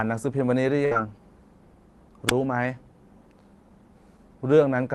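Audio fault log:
0.85–0.94 s: burst of packet loss. A run of packets never arrived in time, so the receiver stretched the last sound for about 54 ms, fading it as it went, then jumped ahead, leaving roughly 60 ms of the speech missing. On a spectrogram the held stretch shows as smeared, repeating harmonics or flat noise dimming toward the gap edge, and the waveform then restarts abruptly at a new point in the sentence, with a visible discontinuity.
2.27–2.32 s: wireless microphone squelch dropout. The FM radio link faded until the receiver's squelch shut the output, giving a quick lift of hiss followed by a hole of near silence lasting about 20 ms before the speech comes back. On a waveform this is a short flat line preceded by a rise of noise; on a spectrogram a thin vertical blank band, broadband static just before it, and the speech energy resuming right after, all within the 12 kHz band of the Opus call path.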